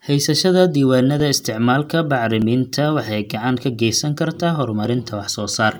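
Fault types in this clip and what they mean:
Clock drift buffer slips: a handful of clicks every 1.22 s, likely unsynchronised clocks dropping or repeating brief sample blocks; evenly spaced vertical spectrogram lines, waveform jumps.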